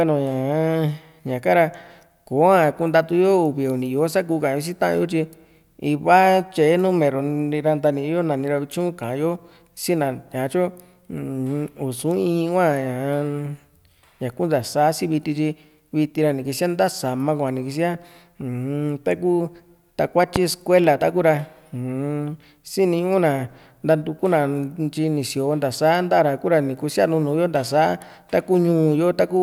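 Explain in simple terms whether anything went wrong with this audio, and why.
Something in the playback or recording chain most likely received a brief electrical jolt, such as a switch being flipped, a plug being moved, or a burst of static, and that jolt got mixed into the audio. The result is a single loud pop at about 20.36 to 20.39 seconds, much louder than the speech around it. This loud pop sits on top of the speech, which keeps going underneath it.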